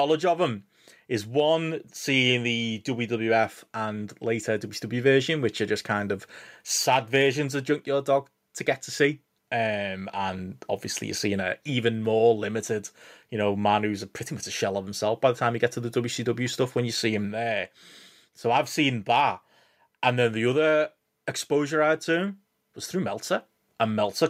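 No technical faults can be heard anywhere in the speech recording, which stays intact and continuous throughout.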